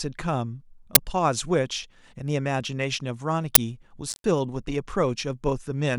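At 0.95 s and again at 3.55 s, the speech is hit by an uninitialised buffer: a block of about 12 ms, which fits a 512-sample buffer, was sent to the output before any audio had been written into it, so whatever stale memory it held was played as samples. Each is a very short, very loud burst of harsh digital noise. Unlike a dropout, the sound is replaced with something far louder than the speech around it.

From 4.09 s to 4.24 s comes an intermittent contact, where a loose connection in the signal path opens for about 120 ms. The speech cuts out, with crackle at the moment the contact breaks and again as it remakes, and faint hiss fills the gap. The scratchy, irregular edges set it apart from a clean digital dropout, and the quiet gap is the opposite of the loud bursts earlier.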